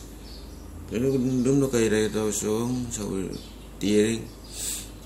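Uncorrected bit errors from weak DAB reception corrupt MP2 scale factors, so single sub-bands jump in level. This DAB burbling adds short blips of noise over the speech from 2.94 to 3.10 s and, more heavily, from 4.53 to 4.64 s.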